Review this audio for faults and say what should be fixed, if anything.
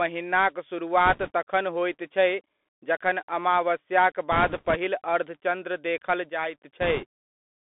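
The speech passes through a Bluetooth CVSD headset codec throughout. The band is limited to about 250 Hz to 3.5 kHz, and the one-bit delta modulation, which fits a 64 kbit/s link, leaves granular hiss and scratchy sibilants. Preventing it means using a wideband headset profile or a wired microphone.

Bit errors on the Bluetooth voice link produce rushing crackle at 1.06–1.31 s before "तखन होइत छै", at 4.32–4.76 s before "अर्धचन्द्र देखल", and at 6.81–7.05 s. The flipped one-bit steps smear into noise rather than clicks, and the error rate is heaviest, around 3 percent, in the middle burst. Preventing it means keeping the headset close to the host and away from radio interference.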